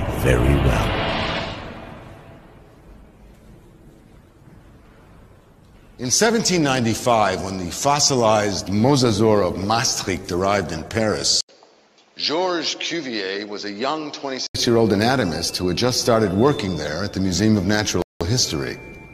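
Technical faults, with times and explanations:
11.41–14.55 s, input switched to a poorer device: the sound suddenly turns duller and boxier after a brief silence of about 80 ms, with nothing above 7.6 kHz, the level down by roughly 5 dB and a new background noise sitting about 35 dB below the signal. The likely cause is a change to a different microphone or headset. Unlike a codec narrowing its bandwidth, the tone, level and noise floor all change together, and all three return to normal at 14.55 s.
18.02–18.21 s, rebuffering stall: playback stops dead and falls silent for about 0.19 s, then resumes from exactly the point where it stopped. The player ran short of downloaded audio and waited for more to arrive. Unlike a packet dropout, nothing is missing on either side of the gap, because the stall only adds time.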